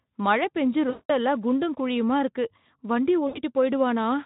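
From 0.89 to 1.11 s and again from 3.27 to 3.40 s, VoIP packet loss concealed by the speech codec replaces about 200 ms and then 80 ms of sound. The decoder repeats its last pitch and filter at falling gain, producing a fading smear, a buzzy tone or coloured noise, that shows as flat harmonic streaks and a tapering waveform envelope.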